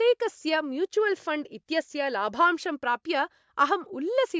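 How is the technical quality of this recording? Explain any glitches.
No technical glitches can be heard anywhere in the recording. There is nothing here that needs explaining.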